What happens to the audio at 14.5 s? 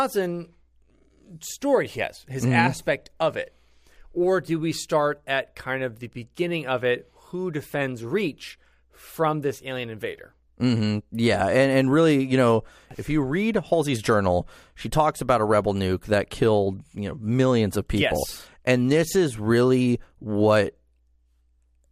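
Nothing goes wrong at 14.5 s; the speech carries on intact through that moment.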